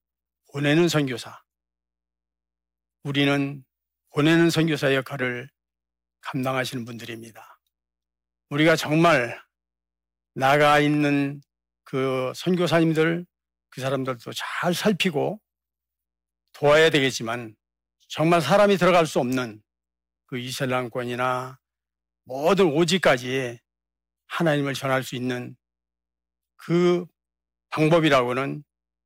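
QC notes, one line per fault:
Throughout: hard clipping. The speech is driven about 6 dB beyond what the signal path can carry, so the louder peaks, about 1.5 percent of the samples, are sliced flat at the ceiling. Those squared-off tops create upper harmonics that were never in the voice, heard as a brittle crackle on peaks. That abrupt, peak-locked edge separates it from soft saturation or limiting, which round peaks gently and add warmth rather than crackle.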